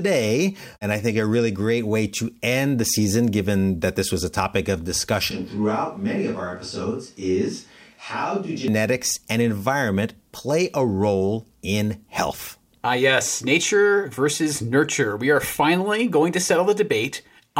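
A switch to a distant microphone runs from 5.31 to 8.68 s, starting right after "was a topic of". The voice suddenly turns roomy and hollow and loses its low end, drops by around 5 dB, and room noise sits roughly 35 dB under the speech. The likely cause is that the close microphone's signal failed or dropped out, so a microphone farther away was used. At 8.68 s the close, full sound returns just as abruptly.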